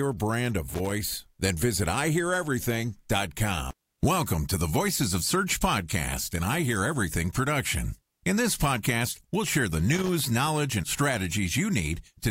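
Speech with two short bursts of irregular scratching crackle, from 0.69 to 0.92 s just after "brand a" and from 9.95 to 10.26 s between "podcast we'll share the" and "knowledge and". This is loose connector crackle, where a worn contact makes and breaks and chops the signal.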